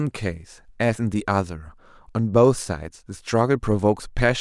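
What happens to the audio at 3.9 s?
Nothing goes wrong at 3.9 s; the speech carries on intact through that moment with no dropout, click, distortion or other fault.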